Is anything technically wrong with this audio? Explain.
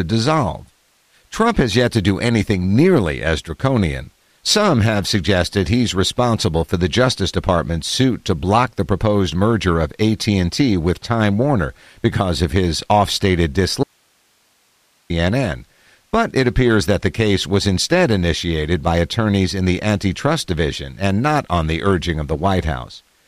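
Yes. From 13.84 to 15.10 s the speech suffers an audio dropout to a faint residue: for about 1.26 s the signal cuts out abruptly, leaving only hiss about 40 dB down, likely because the feed broke while the downstream path stayed live. On a waveform this appears as a sudden near-flat stretch; a spectrogram shows the speech energy vanishing into a thin, uniform noise band.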